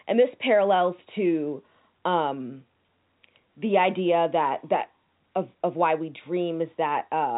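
No technical faults are audible.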